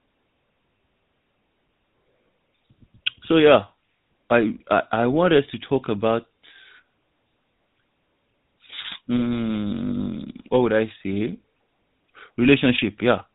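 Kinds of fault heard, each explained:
GSM full-rate codec: Across the whole speech clip, a vocal-tract model driven by a sparse, regularly spaced pulse excitation leaves a plainly audible buzzy, gravelly roughness. Nothing survives above 4 kHz, which fits the 13 kbps full-rate GSM coder and gives a dull, band-limited telephone character.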